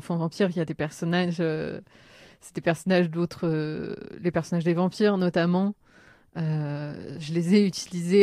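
No technical faults can be heard at any point in this speech recording.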